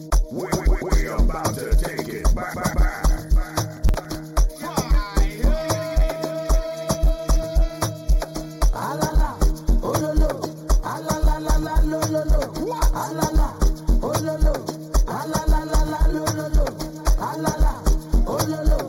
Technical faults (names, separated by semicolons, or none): channel delay (comb filtering); processor overload crackle